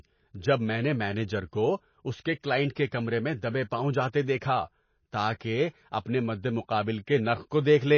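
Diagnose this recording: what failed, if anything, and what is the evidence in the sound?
The codec stage is the likely culprit: MP3 compression at a bitrate low enough to starve the encoder, which fits roughly 24 kbps. Throughout the speech, nothing sounds above 6.6 kHz, and the damage is plainly audible as a watery, swirling texture where weak frequency components drop in and out between frames.

Pre-echo comes from the same codec stage. At 5.39 s a hiss of about 12 ms runs ahead of a sharp onset. The attack landed late in a transform block, so quantisation noise scaled for the loud part spread back into the quiet moment before it.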